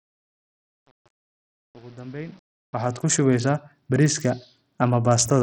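From 0.0 to 3.15 s, a digital fade-in stage keeps only about 8 bits and adds no dither, causing truncation distortion on the fade. The rising speech is built from coarse square steps, so from 0.0 to 2.85 s it sounds gritty before the fade settles.

Throughout the clip, the audio has likely passed through heavy Bluetooth SBC compression at a starved bit pool, which fits a rate near 64 kbps. Nothing remains above 17.2 kHz, the upper treble flickers, and a gritty, aliased haze rides on the speech.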